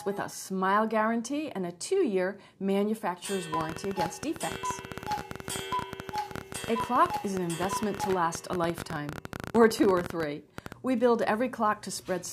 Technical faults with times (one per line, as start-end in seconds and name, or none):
3.54-10.73 train of clicks